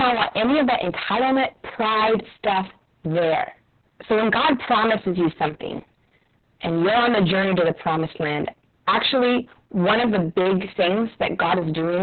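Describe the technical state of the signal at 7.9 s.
At 7.9 s the speech suffers from hard clipping, present across the whole clip rather than just this moment. The signal is driven about 22 dB beyond what the chain can pass, so nearly a third of all samples are cut flat at the ceiling. The result is a constant harsh fuzz on every voiced sound, not occasional crackle on peaks. Unlike soft saturation, the flattened tops add dense, gritty harmonics rather than a warm thickening.

Opus voice compression is also present throughout, with heavy damage. Nothing above about 4.3 kHz survives, a narrowband cut typical of the SILK coder at a very low rate, consistent with roughly 6 kbps and long 60 ms frames. The excitation is coded coarsely, so the speech sounds muffled, hoarse and faintly robotic. A plain low-pass filter would only dull the sound. This codec adds a buzzy, synthetic roughness that filtering cannot produce.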